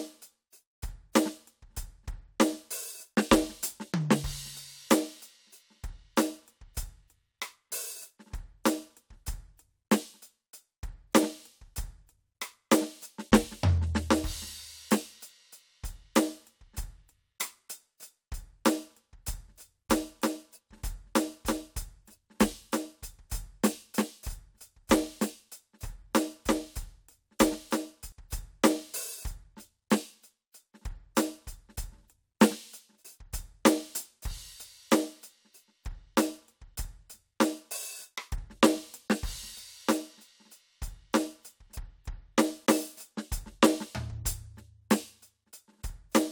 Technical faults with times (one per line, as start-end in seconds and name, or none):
19.26-28.12 doubled audio track